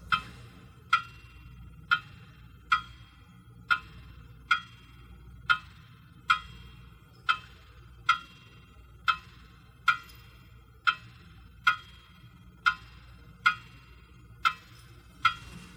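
No technical faults can be heard.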